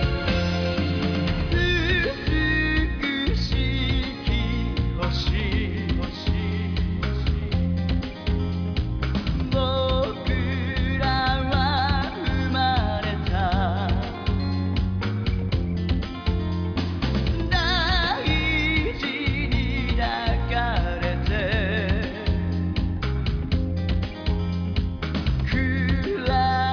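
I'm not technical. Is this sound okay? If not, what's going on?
Yes, no faults can be heard.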